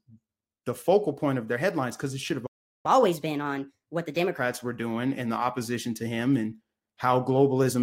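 A playback stall runs from 2.46 s to 2.86 s: the speech cuts off mid-flow and the output goes completely silent for about 380 ms before it resumes. The cause is likely the player running out of buffered data, or its audio thread being blocked, so nothing reached the output until it recovered. The gap is long enough to register as a clear hole in the speech rather than a click.

Catch-up at higher speed follows immediately, from 2.86 s to 4.38 s. Once the stream resumes, the player works through its backlog by resampling at 1.25 times normal speed, and because resampling shifts speed and pitch together, the voice rises by roughly four semitones as well as hurrying along. For about one and a half seconds the speech sounds rushed and audibly higher, then drops back to normal speed and pitch at 4.38 s once the lost time has been recovered.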